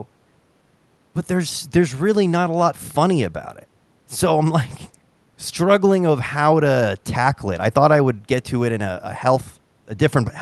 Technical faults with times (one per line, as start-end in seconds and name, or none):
none